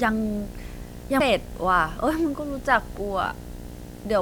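From the start, a video or display buzz runs under the speech at a 60 Hz field rate, with hash riding above it, sitting roughly 15 dB below the signal. A screen or video cable is coupling its field-rate interference into the audio path, producing that steady, harsh drone throughout.

At 1.20 s a CD skip occurs: a short tick as the player mutes for only a few milliseconds, then the speech resumes from a different point. The laser has jumped to another turn of the disc's spiral, so playback abruptly shifts position.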